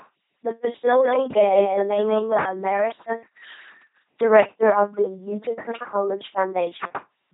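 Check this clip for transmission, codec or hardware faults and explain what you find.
Two faults here: the whole clip runs through an LPC-10 vocoder, and there's a doubled audio track in the early part.

LPC-10 vocoder, throughout: the speech comes out as that buzzy, mechanical robot voice. Each moment gets modelled as a short vocal-tract filter fed either by a pulse train or by noise, never a mix, so voicing gets flattened into buzz or hiss. The damage is heavy, nothing survives above 3.8 kHz, and the sound fits the 2.4 kbit/s rate this codec runs at.

Doubled audio track, 0.85 to 2.39 s: a second full-band copy of the speech trails the original by roughly a fifth of a second, sitting about 5 dB lower. It has no reverb tail or room colour, just a clean duplicate, and it cuts in and out abruptly at those two points. That's likely a second, slower capture path being mixed in alongside the main one, giving a stuttery, slapback feel while it lasts.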